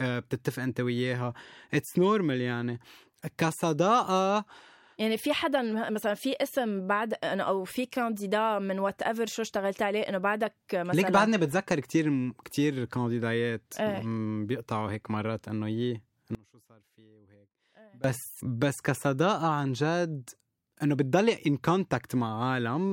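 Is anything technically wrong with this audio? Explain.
Yes. From 16.35 to 18.04 s the speech suffers an audio dropout to a faint residue. For about 1.7 s the signal collapses abruptly to a faint leak far below normal level. The likely cause is a brief loss of the wanted signal while the downstream path stayed live.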